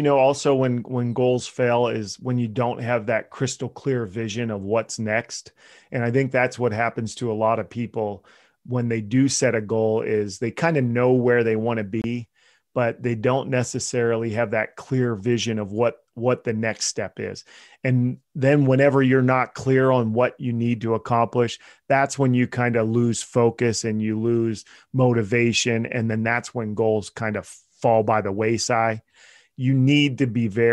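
At 12.02 s the speech cuts to silence for about 23 ms and returns at 12.04 s, a short hole with abrupt or briefly faded edges. The likely cause is a Bluetooth dropout: audio data failed to reach the headphones in time and was discarded, and the gap length fits a single lost packet. When the stream resumes, the speech picks up further along, as if it had kept playing through the silence.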